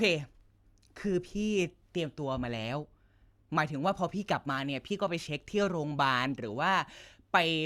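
Nothing stood out on listening to this speech recording.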